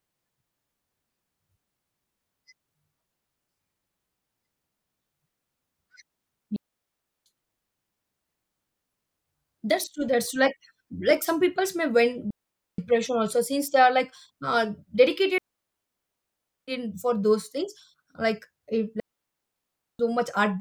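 Digital wireless dropouts cut the speech four times: 6.56–7.26 s, 12.30–12.78 s (between "some people's may when" and "also since they are"), 15.38–16.68 s (before "in for those things"), and 19.00–19.99 s. Each time the receiver lost too much data and muted. On a waveform these are flat gaps, and on a spectrogram they are blank columns, with no noise burst at either edge.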